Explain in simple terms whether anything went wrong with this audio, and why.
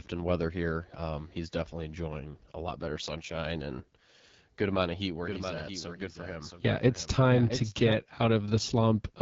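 AMR wideband (HD Voice) codec, throughout: the speech went through a phone-call compressor running at one of its lowest settings. It rebuilds the voice from a simplified model, so the speech sounds rough and raspy, and nothing above about 7.5 kHz survives.

Doubled audio track, 5.25 to 7.93 s: just after "amount of heat where", a second, somewhat quieter copy of the speech abruptly joins, trailing about 0.7 seconds behind. It has no room echo, so the likely cause is the sound being recorded twice through a slower path.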